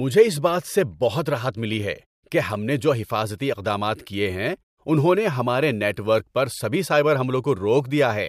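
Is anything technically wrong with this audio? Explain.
No, nothing stood out as a technical problem on listening to this speech clip.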